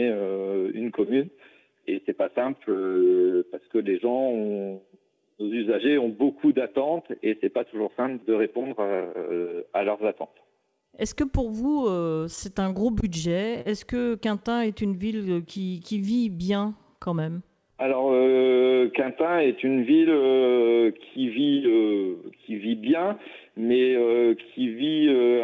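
Between 12.36 and 13.04 s there are scattered short gaps: about four small holes, none longer than roughly 20 ms, each patched by continuing the preceding sound. They come through as brief ticks or smears spread across the stretch, not as a single held sound, and nothing is audibly lost.

At 13.61 to 13.67 s comes a short stall from a late packet. The jitter buffer ran dry, so the last sound is held for 41 ms until the packet arrives, and then playback resumes from the same point. It is one isolated hold, and the delay grows by 41 ms.

From 14.50 to 16.03 s the jitter buffer slow-down stretches the sound to 95% speed, adding 91 ms. It does this by repeating single pitch periods or bits of pauses many times in a row. Pitch stays the same, unlike the stall's single hold. Throughout, the band-limit at 8 kHz fits the G.722 call codec.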